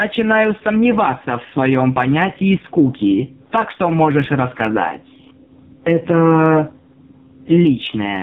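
Throughout the speech, the level pumps by around 10 dB, squashing the dynamics. This gain pumping is likely from input gain set far too high, with a fast limiter clamping down on peaks. The voice is also buzzy and synthetic, with nothing above 4 kHz and heavy smearing. That is the AMR narrowband mobile codec working at a very low rate, consistent with its 5.15 kbps mode. Under everything runs a steady 46.9 Hz buzz while pace and pitch stay normal. This is a block size mismatch that truncates each block, and the buzz rate fits 1024-sample blocks at 48 kHz with their tails discarded.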